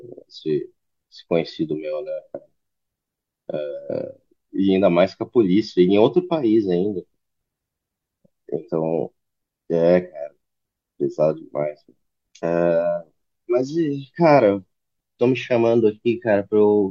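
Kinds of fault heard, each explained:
Stream segment skipped: Between 12.40 and 12.44 s the speech jumps abruptly forward, with a brief blip at the join. The flow breaks rather than pausing. Likely one stream segment failed to load and the player moved straight on.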